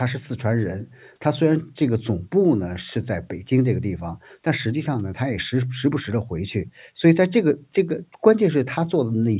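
No technical faults can be heard anywhere in the recording.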